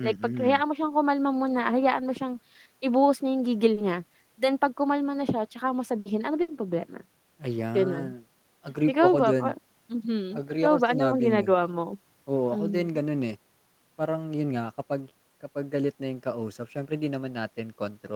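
At 3.73 s a short stall from a late packet holds the speech for a moment, until 3.79 s. The packet arrived after its playout time, so the jitter buffer ran dry and the receiver stretched the last sound by about 30 ms, giving a brief held tone with a faint buzz. Nothing is lost. Playback picks up where it stopped, but everything after runs 30 ms later than before.

Two bursts of packet loss follow close together, from 5.99 to 6.10 s and from 6.42 to 6.51 s. Each time, consecutive packets never arrived in time to play. The receiver extended the last sound for about 60 ms and faded it, so the speech turns briefly into a decaying buzz or hiss. Playback then resumes further along, and about 60 ms of speech is missing at each break.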